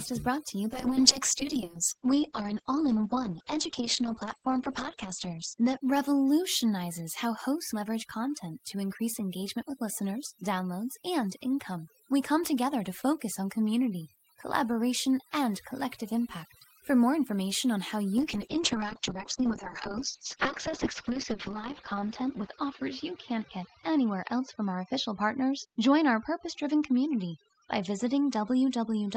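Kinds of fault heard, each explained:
Overdone noise removal, throughout: noise reduction set too hard switches off bands near its noise estimate, leaving a lowered background with twinkling specks.
Call bitrate drop, 0.74–7.11 s and from 18.19 s: the encoder, starved of bits, codes coarsely and cuts everything above 8 kHz, so speech turns rough and muffled.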